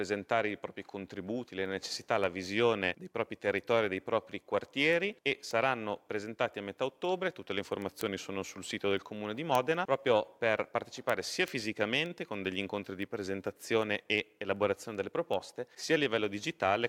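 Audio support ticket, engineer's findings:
Word clock ticks, 0.12 s to 16.88 s. Regular ticks roughly every 0.2 s, around a hundred in all, uneven in strength. Probable component: digital input receiver running free, not locked to the sending device's clock. Mechanism: clocks drift past each other at around 100 ppm; each slip drops or repeats one sample. Unlike random clicks or dropouts, the steady spacing holds through the whole clip.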